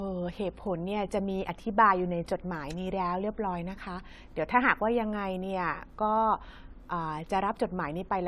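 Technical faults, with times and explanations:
Throughout, generation loss: the speech sounds swirly, hollow and smeared, with consonant attacks blurred and nothing above 16.4 kHz. This is likely from repeated lossy re-encoding, around four passes of AAC-LC at a rate that points to about 96 kbit/s. Each pass quantises again on a shifted frame grid, so its noise and missing spectral bands pile onto the last. That makes the damage worse than one encode at that rate would.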